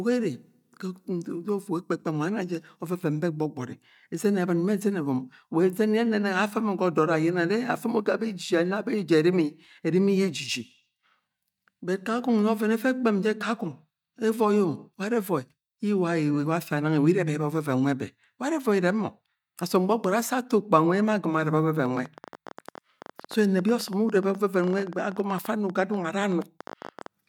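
From 21.86 to 27.07 s, a train of clicks ticks unevenly at 12.9 per second; its matching pulses, likely interference, set it apart from random crackle.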